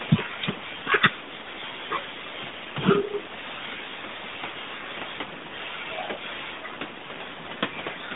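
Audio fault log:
The speech arrives over a narrowband mobile link, confined to roughly 150 Hz to 3.7 kHz, with no audible fault anywhere in the signal.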